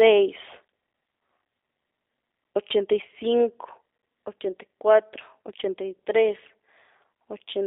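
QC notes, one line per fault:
throughout, G.729 codec: the speech sits in a narrow telephone band of roughly 300 Hz to 3.7 kHz and has a rough, synthetic buzz, which fits an 8 kbit/s G.729 coder that rebuilds each frame from a filter, pitch predictor and sparse pulses. Unlike a plain band-limit, the voice itself sounds rebuilt, not just muffled.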